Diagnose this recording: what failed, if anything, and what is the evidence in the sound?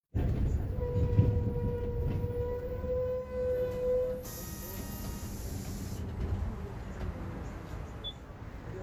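What failed is upstream of the recording, in the receiver: digital radio blending to analogue. At 3.09 s the sound cross-fades over about 0.38 s to the FM feed, with faint hiss roughly 40 dB down and the level steady, until 8.41 s.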